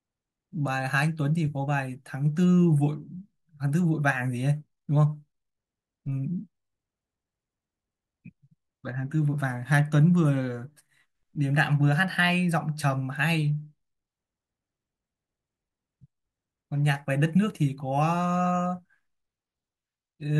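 No technical faults can be heard anywhere in the recording. Nothing in the audio calls for a timestamp or further comment.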